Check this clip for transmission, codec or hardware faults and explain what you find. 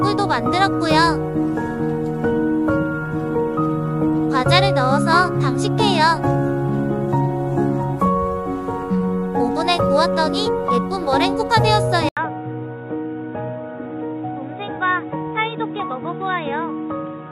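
One fault is present, starting at 12.09 s and lasting to the end: an input switched to a poorer device. After an 80 ms gap, the recording likely moves to a narrower-band microphone or headset call profile. Nothing remains above 3.8 kHz, so the sound turns dull and boxy. The level falls by roughly 10 dB, and a new noise floor appears about 30 dB below the signal. A spectrogram shows the upper band cut off flat at 3.8 kHz after a brief blank column. The waveform shrinks at the switch.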